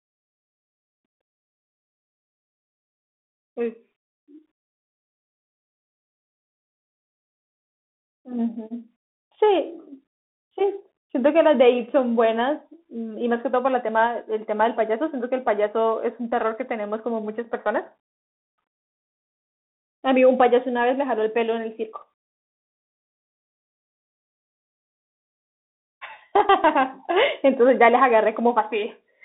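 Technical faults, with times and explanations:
Throughout, Bluetooth CVSD headset codec. The speech is confined to a narrow band of about 250 Hz to 3.7 kHz, so it sounds thin and boxed in. CVSD codes each sample as a single up-or-down bit, which fits a 64 kbps stream. Its step size adapts too slowly for loud high sounds, so they distort. S sounds turn scratchy. A granular hiss sits under the speech, and the damage is plainly audible.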